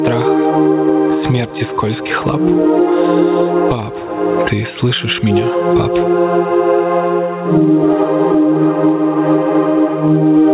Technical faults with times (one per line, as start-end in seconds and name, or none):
0.00-10.53 gain pumping